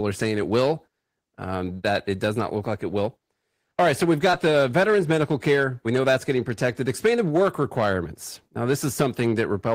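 A crackle on the loudest peaks runs throughout: hard clipping, where a stage was driven about 6 dB past its limit and a small fraction of peaks were cut flat. At 4.31 to 4.35 s, between "right so we've" and "the veterans medical care", a brief smear marks short concealed packet loss, with missing audio patched by extending the preceding sound.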